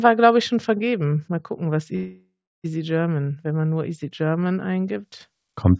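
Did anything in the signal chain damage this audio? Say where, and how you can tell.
Yes. There's a call audio freeze at the network and jitter-buffer stage, from 1.96 to 2.66 s, right after "gucken was". The last sound is stretched into a fading buzz that drops to silence for about 0.32 s, then the audio picks up where it left off. Nothing is skipped, and the remainder runs about 0.68 s late. That's likely packets stalling in transit and the buffer running dry, with the G.722 path's 8 kHz ceiling in place throughout.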